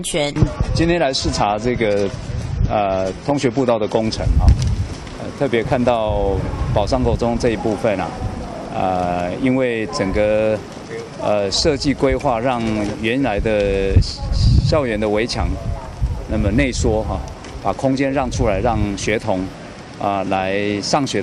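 For the first 4 s the sound is dull and smeared, with nothing above 11.8 kHz and stronger codec artefacts, then sharpens abruptly with no gap. This is an adaptive stream starting at a low bitrate, consistent with AAC near 32 kbit/s stepping up to 96 kbit/s once the connection was measured.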